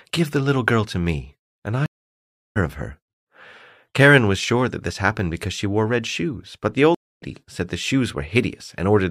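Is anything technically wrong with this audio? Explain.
Yes, there are two stream reconnects. At 1.86 to 2.57 s the connection drops, leaving about 0.7 s of silence, and the audio picks up roughly 0.7 s further on. At 6.95 to 7.22 s a shorter gap of about 0.27 s skips ahead by around 0.2 s. Each time the player restarts decoding mid-stream, so material goes missing.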